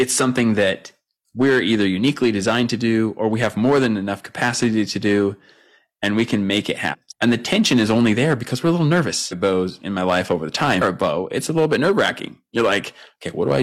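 A speech recording with hard clipping throughout: driven about 7 dB past full scale, so a small share of peaks flatten into crackle, unlike soft limiting's smooth squash. Damaged data in a compressed stream adds glitches at 6.89–6.95 s after "we can make it", 9.28–9.33 s between "because we're a little" and "of bows in my", and 10.77–10.82 s after "my life over the". These come from lost decoder sync.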